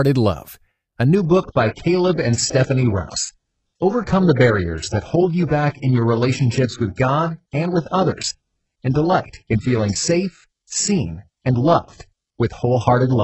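A speech recording that drops to an adaptive stream at a lower bitrate at 1.15 s and stays there to the end. The switch is abrupt but seamless. Content above 8 kHz disappears, which fits a step from roughly 96 kbit/s AAC down to an 8 kbit/s HE-AAC rendition. Unlike a network dropout, there is no gap or stutter. Unlike a plain low-pass filter, codec artefacts rise as well.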